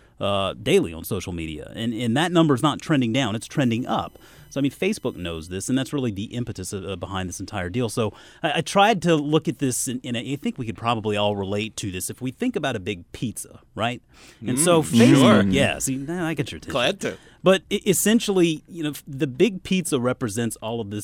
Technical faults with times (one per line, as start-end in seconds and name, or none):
3.40-5.51 USB whine